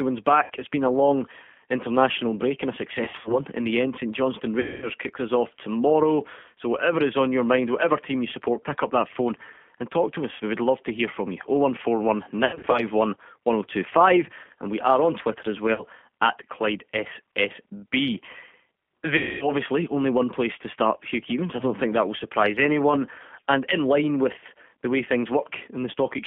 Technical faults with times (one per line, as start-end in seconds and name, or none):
0.00-26.26 G.729 codec
0.44-0.51 VoIP packet loss concealed by the speech codec
3.05-3.41 VoIP packet loss concealed by the speech codec
4.60-4.91 VoIP packet loss concealed by the speech codec
10.34-10.41 VoIP packet loss concealed by the speech codec
12.45-12.87 VoIP packet loss concealed by the speech codec
15.74-15.82 VoIP packet loss concealed by the speech codec
19.17-19.51 VoIP packet loss concealed by the speech codec